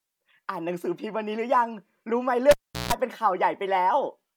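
At 2.51 s the speech breaks with a pop as a live cable is pulled. Near silence follows for about 370 ms. A 60 Hz mains buzz lasts about 160 ms while only the plug tip touches. A second pop at 2.93 s brings the sound back.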